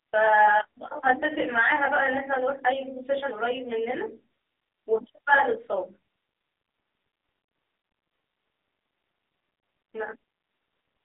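From start to finish the speech sounds rough and slightly doubled. This is channel delay causing comb filtering: one channel runs roughly 20 ms behind the other, and summing them to mono cuts closely spaced notches from around 30 Hz upward.

Across the whole clip the speech is also buzzy, boxy and synthetic, with plainly audible codec damage and nothing above 3.8 kHz. That is the AMR narrowband mobile codec, whose telephone band of 300 Hz to 3.7 kHz and crude vocal model fit a low rate of about 7.4 kbps.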